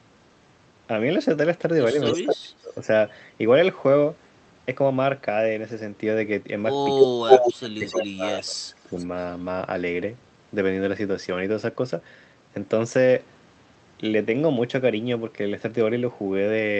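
At 2.05 to 2.2 s a faint delayed copy of the speech comes back about 270 ms late and about 10 dB under the talker. That's an echo leak, likely a far-end loudspeaker getting past its echo canceller. Overlapping it, from 2.16 to 2.88 s, the talker dips by up to about 20 dB for around half a second: speech suppressed in double talk, likely the canceller ducking everything while both sides are active. Another very quiet echo scrap, about 35 dB down, sits at 2.43 to 2.75 s.

The second round is worse. From 6.95 to 8.96 s the talker is pushed down by as much as about 25 dB for roughly a second and a half in total. Meanwhile the echo, now lagging about 300 ms, bursts through at 7.0 to 7.07 s and 7.28 to 7.53 s, actually louder than the speech by about 5 and 10 dB. It fades after that, about 10 dB under at 7.86 to 8.06 s and about 25 dB under at 8.81 to 9.06 s.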